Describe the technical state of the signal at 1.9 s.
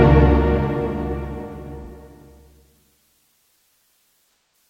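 At 1.9 s there is AAC frame loss with concealment, spanning 1.84 to 1.91 s, which fits a single lost frame. The decoder rebuilt it from the preceding spectrum, producing a brief smeared, noisy patch.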